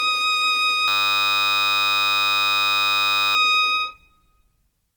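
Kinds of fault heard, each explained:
generation loss: Throughout, the music sounds swirly, smeared and hollow, attacks blur, and nothing remains above 18.6 kHz. The damage exceeds a single encode and is likely from repeated lossy encoding, fitting about five AAC passes, each re-quantising on a shifted frame grid.
system hang loop: From 0.88 to 3.35 s the music freezes into a steady 100 Hz buzz as one 10 ms slice repeats exactly. The system hung while the sound hardware kept cycling its ring buffer, so roughly three seconds of music never arrived.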